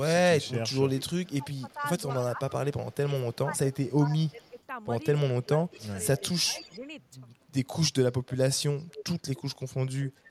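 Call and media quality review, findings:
Echo leak, 0.45–2.95 s, 3.5–4.62 s, 5.45–6.79 s, 8.31–9.4 s, 10.06–10.2 s: faint copy trailing about 235 ms behind, strongest at 8.31–9.4 s. Likely far-end loudspeaker pickup incompletely cancelled.

Speech suppressed in double talk, 1.13–4.56 s and 5.28–6.85 s: level dips up to roughly 15 dB during overlap. Likely echo canceller attenuating the talker along with the echo.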